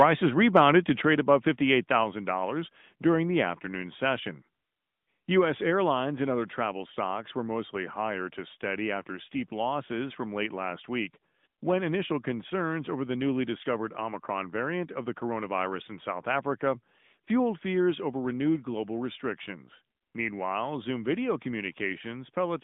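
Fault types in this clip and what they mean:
AMR narrowband mobile codec: the speech is band-limited to roughly 150 Hz to 3.6 kHz and sounds buzzy and synthetic, which fits a 10.2 kbps mobile rate; a spectrogram shows nothing above 4 kHz.
Microphone volume stepped down: at 1.02 s the level drops by about 5 dB in one step, likely an automatic input-gain cut; the waveform envelope shrinks abruptly there.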